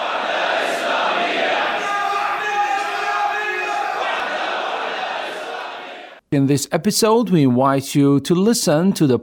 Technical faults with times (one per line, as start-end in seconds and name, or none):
1.71 audio missing between chunks
4.20 audio missing between chunks
6.69 audio missing between chunks